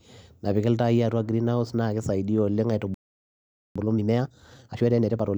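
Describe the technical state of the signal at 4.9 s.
At 4.9 s the speech sits inside a time-compressed catch-up running from 3.76 to 5.28 s. The player is draining a backlog left by a stall: it cuts out short slices of the signal and cross-fades the remaining pieces together, so the passage plays at 1.5 times normal speed without any rise in pitch. The result sounds hurried.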